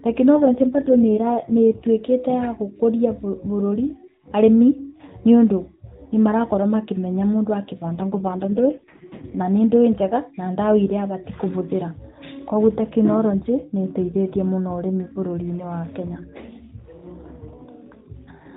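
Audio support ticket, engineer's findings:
AMR rate drop, 0.39–1.89 s and 7.88–9.46 s: speech turns buzzy and synthetic, consistent with a codec rate fall from 12.2 to 4.75 kbps. Band stays at the 4 kHz AMR-NB limit and there is no gap, unlike packet loss or a bandwidth switch.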